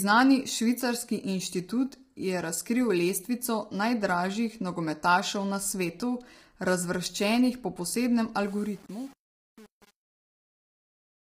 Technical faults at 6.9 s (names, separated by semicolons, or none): low-delay AAC compression